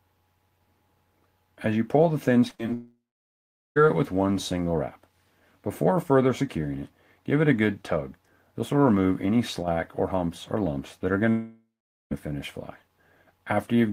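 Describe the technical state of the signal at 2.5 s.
Right at 2.5 s there's short concealed packet loss, twice: 2.49 to 2.53 s and 2.55 to 2.61 s. The receiver stretched the preceding sound over each missing 20 ms and 40 ms gap, giving a brief smear.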